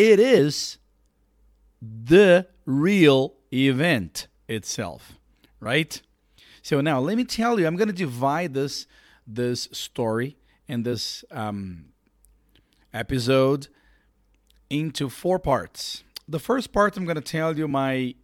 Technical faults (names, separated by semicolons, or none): damaged data in a compressed stream